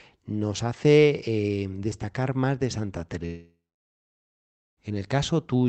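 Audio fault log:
3.25 to 4.79 s, long network dropout: the sound smears into a fading buzz, then about 1.2 s of near silence, likely lost packets, and resumes with that stretch gone.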